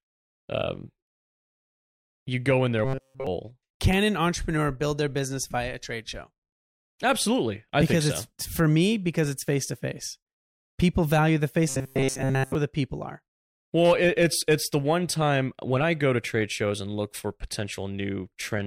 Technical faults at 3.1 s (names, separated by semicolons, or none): robotic sound from repeated short buffers